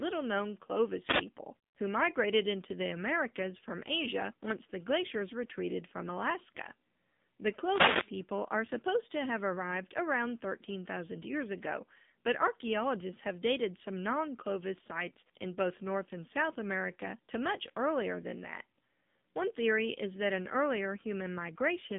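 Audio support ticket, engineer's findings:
AMR narrowband mobile codec, throughout: nothing above 3.8 kHz, line band about 150 Hz to 3.7 kHz. Plainly audible buzzy, synthetic speech from the pulse-excited vocal-tract model. The coarseness fits a low mode such as 7.4 kbps. Probable component: mobile leg.

Wireless microphone noise hit, 1.04 to 1.25 s: short swish of static over the speech. Probable component: analogue FM radio mic. Reflections cancelling the carrier let receiver noise rise over the signal for about 0.2 s.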